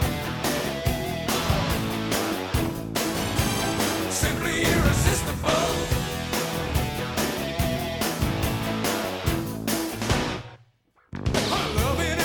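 No technical faults are audible.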